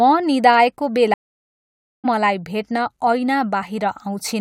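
A speech clip with a stream reconnect: from 1.14 to 2.06 s the sound goes silent for 0.9 s, then resumes at "मलाई भेट्न" roughly 0.7 s further on. Unlike a simple dropout, content is skipped, because a fresh decoder rejoined the live stream mid-flow.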